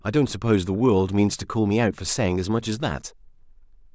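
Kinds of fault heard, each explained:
No faults can be heard in this speech recording. Nothing in the sound points to a problem anywhere in the chain that carried it.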